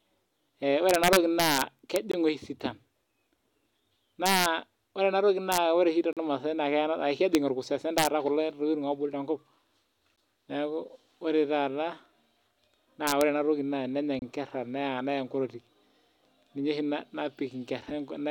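Integer overflow from 0.89 to 1.96 s: loud speech peaks exceed the integer range and wrap to the opposite sign, producing violent cracks sharper than clipping, at up to about 3 dB overdrive. A gap between stream segments at 2.12 s is a hard-edged 20 ms silence where segment timestamps fail to meet. More overflow cracks follow at 4.26 to 4.46 s and 5.52 to 5.58 s. A 39 ms gap comes at 6.13 s, then further overflow at 7.35 s and 7.98 to 8.07 s. A 14 ms gap at 10.16 s falls just before "neaku ore taata". Overflow recurs at 13.07 to 13.21 s. A 28 ms gap at 14.19 s follows "enatoki na enenya". The gaps recur at 4 s intervals, which points to 4-second segments.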